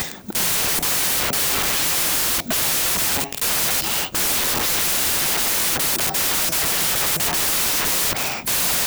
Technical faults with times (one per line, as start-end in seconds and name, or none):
0.00-8.86 wrong sample width